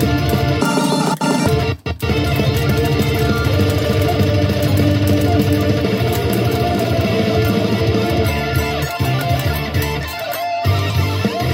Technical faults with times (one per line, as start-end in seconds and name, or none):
0.61-1.46 audio read two samples at a time (double speed)